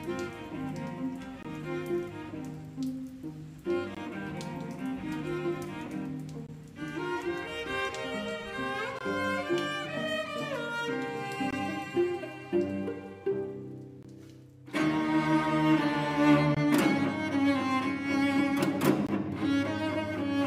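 Gaps between chunks cut the sound at 1.43–1.45, 3.95–3.97, 6.47–6.49, 8.99–9.01, 11.51–11.53, 14.03–14.05, 16.55–16.57 and 19.07–19.09 s. Each 20 ms silence follows a 2.5 s chunk, heard as a regular hard-edged dropout. It shows as flat waveform slivers and thin vertical blank stripes on a spectrogram.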